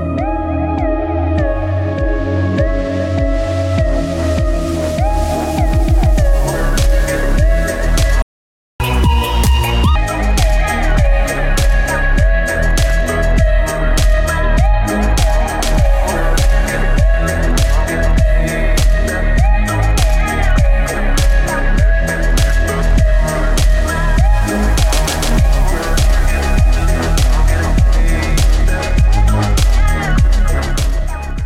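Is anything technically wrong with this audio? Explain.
Yes, there are two related faults.

From 8.22 to 8.80 s there is a playback stall: the sound stops abruptly for about 0.58 s, likely because the player's buffer ran dry or its thread was blocked. The waveform drops to a flat line, and the spectrogram shows a clean vertical gap across all frequencies.

From 8.80 to 9.96 s comes catch-up at higher speed: the player resamples its backlog at 1.5 times normal speed, so tempo and pitch jump up, by roughly seven semitones, before snapping back. On a spectrogram, harmonics shift upward and events crowd closer together.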